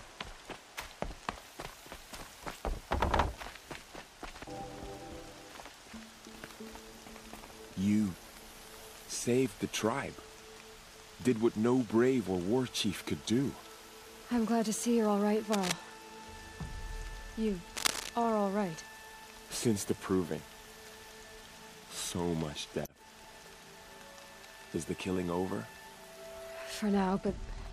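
Two bursts of cable scratch noise, at 15.52 to 15.72 s and 17.76 to 18.09 s, sit at roughly the level of the audio itself, likely a worn connector or lead being moved.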